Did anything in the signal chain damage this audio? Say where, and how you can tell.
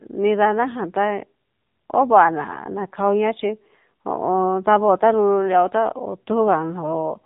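Yes, at the codec: it's AMR narrowband mobile codec throughout, nothing above 3.8 kHz, and the buzzy synthetic speech fits a low, roughly 7.4 kbps mode.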